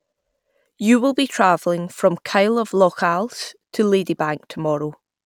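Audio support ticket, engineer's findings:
Engineer's findings: no audio fault found in the speech clip for this support ticket.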